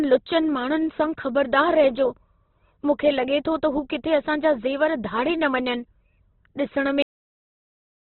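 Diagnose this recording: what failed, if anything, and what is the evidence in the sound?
The codec stage is the likely culprit: the speech sounds as if it went through Opus compression at a very low bitrate, which fits something near 12 kbps. Throughout the clip nothing is present above about 4.1 kHz, giving a narrowband, muffled quality. Under that ceiling the damage is heavy. With too few bits to code each band accurately, the encoder fills in detail with folded or noise-like content, so the voice comes out rough and grainy rather than clean.

The failure is at the buffer or storage stage, and the symptom is a cut-off end. At 7.02 s the speech stops dead in the middle of sound and falls straight to digital silence, which lasts to the end. Nothing decays or tails off naturally at that point. That abrupt stop means the final buffers were never written or played out, so the recording is truncated rather than having ended on its own.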